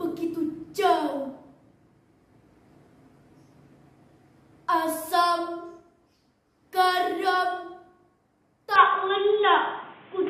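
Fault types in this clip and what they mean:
Input switched to a poorer device: from about 8.76 s to the end, the sound abruptly goes dull and boxy, with nothing above 3.8 kHz, a small level jump, a faint new noise floor and no gap at the switch, likely from recording moving to a narrower-band microphone or headset.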